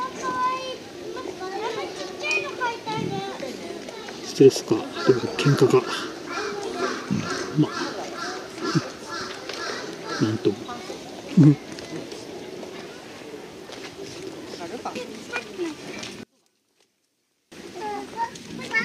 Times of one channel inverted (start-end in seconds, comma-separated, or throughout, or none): 16.23-17.52